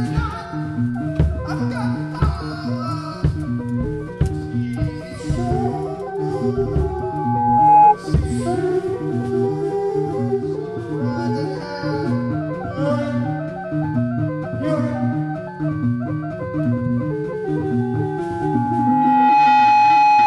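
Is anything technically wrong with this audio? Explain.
Yes. There is loudspeaker feedback squeal in two places. The first runs from 6.80 to 7.95 s. The second starts at 17.80 s and lasts to the end. Both are a single steady tone near 837 Hz. A microphone is hearing its own loudspeaker, and at that pitch the loop gain tops one. The tone swells over about a second the first time and about 1.5 s the second, then stands well clear of the sound, around 15 dB above it the first time and 10 dB the second.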